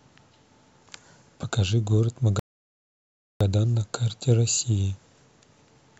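At 2.39 s the speech halts in a rebuffering stall: the player exhausted its downloaded audio and waited for more, leaving dead silence until 3.41 s. About 1.01 s is added, yet nothing is skipped, since the speech picks up exactly where it broke off. On a waveform this shows as a flat silent gap with clean edges; a spectrogram shows a fully blank vertical band, with energy resuming on the far side.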